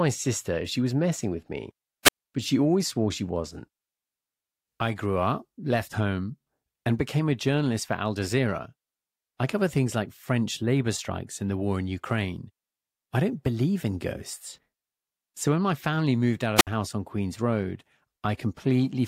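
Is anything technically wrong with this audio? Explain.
Yes. At 2.05 to 2.13 s and 16.56 to 16.67 s the speech thins into a brief rush of hiss, then drops to near silence for about 52 ms and 62 ms before returning. This is a wireless microphone squelch dropout: the FM radio link faded, so the receiver muted its output.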